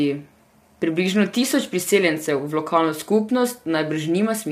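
Low-delay AAC compression, throughout: the speech sounds plainly rough and grainy, likely from AAC-ELD's short frames smearing pitch harmonics at a rate pointing to around 32 kbps.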